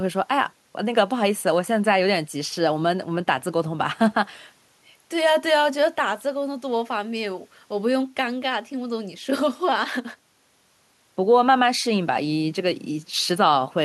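No technical faults are audible.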